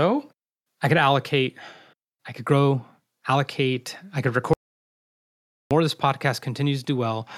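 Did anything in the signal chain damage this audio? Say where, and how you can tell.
Yes. At 4.53 s the speech cuts off abruptly just after "grow allocate I could" and the signal falls to digital silence, with no room tone or noise floor, until 5.71 s, about 1.17 s later, when it resumes mid-flow. That is an audio dropout to silence. The stage is most likely the input path, either the capture device or its link losing signal while the recorder kept writing zeros. Whatever was spoken in that gap is unrecoverable.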